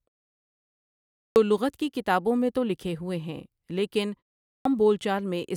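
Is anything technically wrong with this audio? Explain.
Yes. There is a clipped start after a pause at 1.19 to 1.36 s and again at 4.48 to 4.65 s. The output device sleeps through the silence and takes about 170 ms to wake, so the speech begins abruptly without its first sounds. The waveform shows flat silence, then a sudden full-level onset with no build-up.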